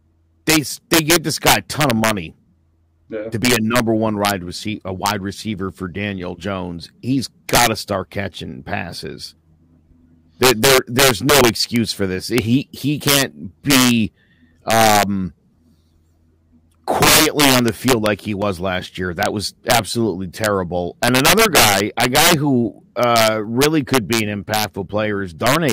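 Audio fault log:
Throughout, integer overflow: the signal was driven about 12 dB past the integer limit and wrapped to the opposite sign instead of being limited, so around one percent of samples, the loudest speech peaks, flip across the full range and crack far more harshly than clipping.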